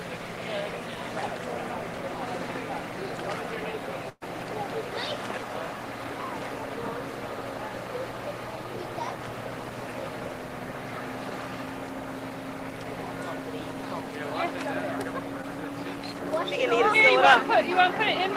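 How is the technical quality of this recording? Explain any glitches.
Two transmission glitches disturb the recording, both from lost network packets.

From 4.09 to 4.23 s there is a burst of packet loss. About 120 ms of audio never arrived. The receiver extended the preceding sound for roughly 120 ms, fading it into about 40 ms of silence, so a held buzz or hiss replaces the missing stretch before playback jumps ahead.

At 15.41 s a short concealed packet loss occurs. Around 20 ms failed to reach the decoder in time, and the receiver synthesised about 14 ms from the last sound before blending back. This is heard as a brief smear or wobble, and a short transient may drop out.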